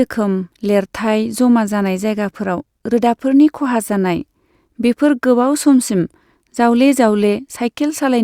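Speech, no audible faults.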